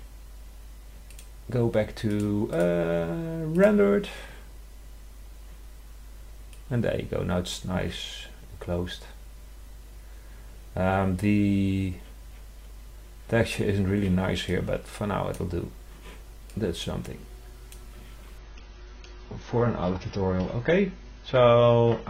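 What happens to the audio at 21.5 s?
At 21.5 s the audio is inside a stretch of adaptive stream at a lower bitrate, running from 18.38 s to the end. Quality drops abruptly with no gap, nothing is present above 6.6 kHz, and codec artefacts rise, which fits a switch to a roughly 16 kbit/s version of the stream.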